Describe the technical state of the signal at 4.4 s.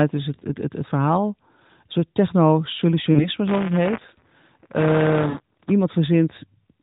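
At 4.4 s the signal is inside a stretch of buffer tearing running from 3.47 to 5.72 s. The writer and the playback hardware have slipped, so a small slice of each buffer replays audio from about one cycle earlier. This produces a robotic 172 Hz rattle, consistent with a 256-sample buffer, over the speech.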